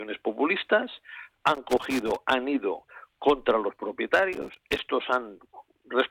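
From 1.55 to 2.17 s and again from 4.33 to 4.84 s there's loose connector crackle: a dirty contact flickering open and shut, chopping the sound into irregular scratchy bursts.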